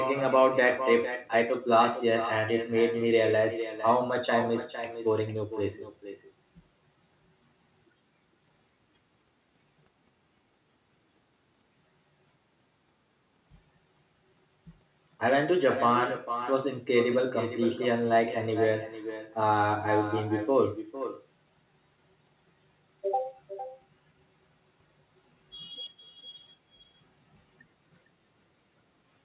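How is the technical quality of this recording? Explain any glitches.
The recording has one clear fault, an echo with no canceller, running through the whole speech clip. It sits on top of narrowband call audio with nothing above 4 kHz, consistent with a standard telephone-grade codec.

Echo with no canceller, throughout: the far end played the call through a loudspeaker, its microphone picked it up, and no echo cancellation removed it before sending it back. Every phrase is followed roughly half a second later by a copy about 10 dB quieter. That copy sounds thinner than the direct signal, giving a doubled, slapback effect.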